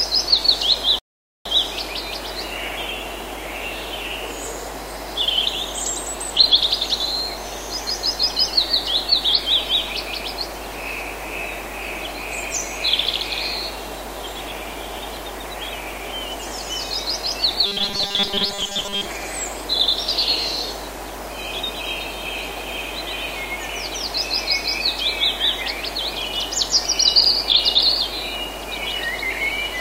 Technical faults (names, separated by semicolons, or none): rebuffering stall; robotic sound from repeated short buffers